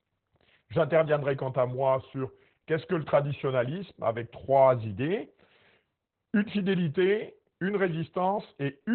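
From start to finish the speech carries Opus voice compression, and it's pretty heavy. Nothing gets through above about 4.2 kHz, so the voice sounds boxed-in and muffled, like an old phone line. That narrowband cut and the coarse, slightly hoarse, robotic edge point to the SILK speech coder running at a very low rate, somewhere around 8 kbps, with the excitation squeezed hard to fit. The coding runs in 20 ms frames.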